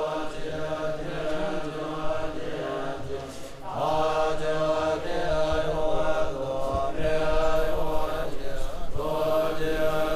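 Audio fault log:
7.56–10.16 s, crude rate conversion: from here to the end the sound picks up a gritty, inharmonic fizz, because samples are being repeated rather than properly filtered, which fits a jump from 32 kHz to 44.1 kHz. The error sits roughly 30 dB down and rides on loud, bright moments.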